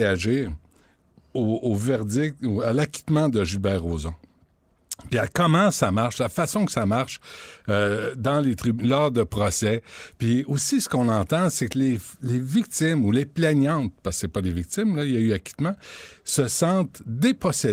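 Speech with no technical faults to report, carried over Opus voice coding whose full-band, lightly coloured sound fits a hybrid mode at around 24 kbps.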